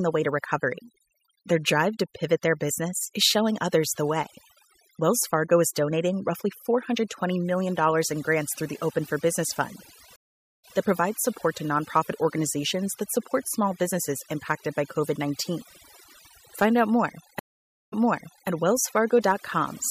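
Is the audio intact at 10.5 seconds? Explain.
No. A stream reconnect runs from 10.16 to 10.75 s. The connection dropped, the player fell silent for about 0.48 s, then a fresh decoder picked up mid-stream. Playback resumes 0.12 s earlier than where it broke off, so a short stretch repeats. Overdone noise removal also affects the whole clip. Heavy noise suppression has carved away frequency bands near its noise estimate, which leaves a near-silent, twinkling background on either side of the gap.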